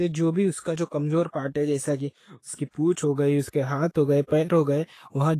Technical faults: Vorbis compression; pre-echo

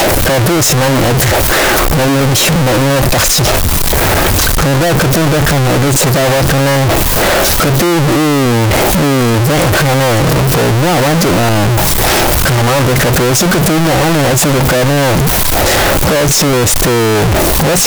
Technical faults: float read as integer

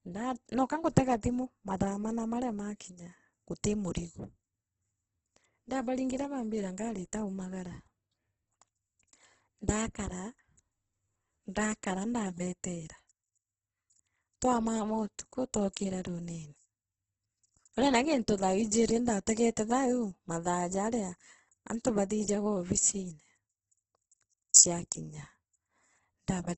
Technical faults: Opus compression

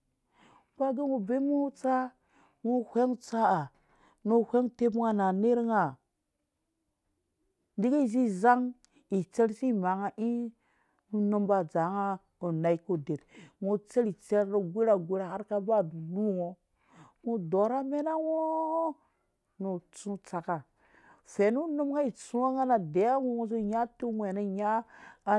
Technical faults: none

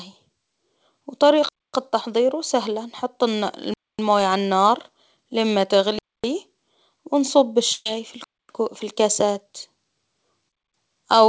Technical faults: gap between chunks; burst of packet loss

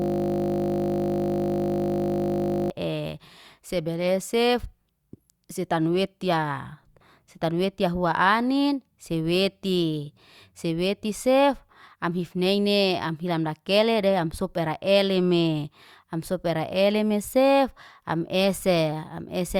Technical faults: system hang loop

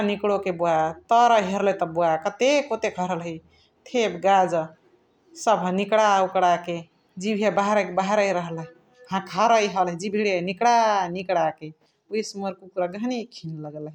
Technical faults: none

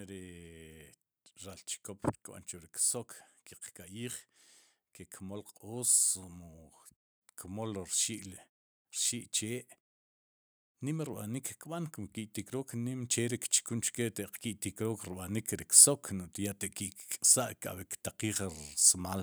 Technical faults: automatic gain rising

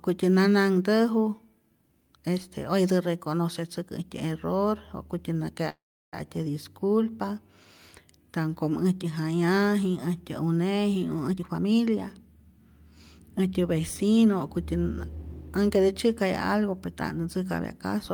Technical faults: call audio freeze; jitter buffer speed-up

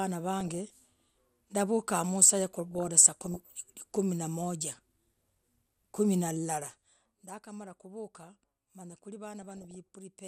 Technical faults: MP2 compression; DAB burbling

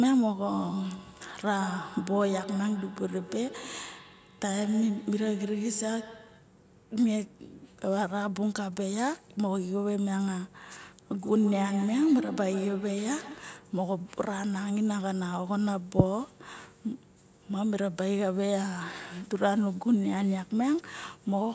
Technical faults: feedback echo between two devices

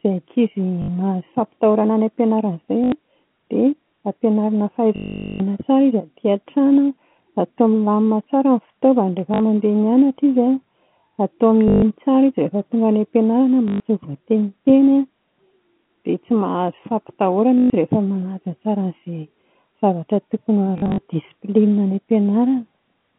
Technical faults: packet loss with last packet repeated

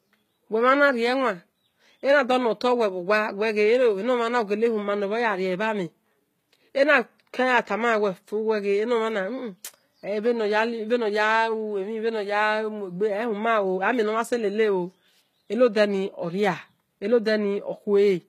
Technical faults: HE-AAC compression

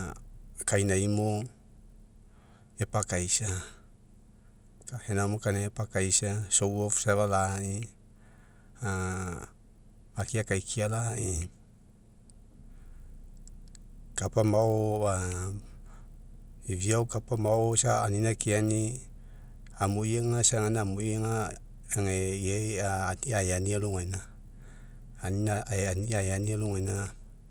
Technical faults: resampler restarted on every block

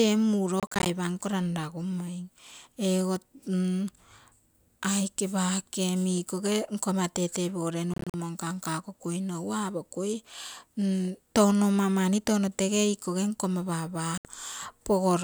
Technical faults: Bluetooth dropout

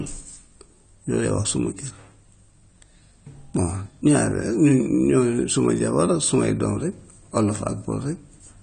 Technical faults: AAC compression

